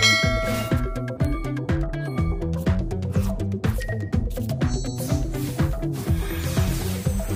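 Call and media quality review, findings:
Bit error spike at 1.25 s: single sharp tick, one corrupted sample peaking about -13 dBFS. Probable flipped bit in memory or digital link. Waveform shows a lone vertical needle; spectrogram shows a thin full-band vertical line unrelated to surrounding content.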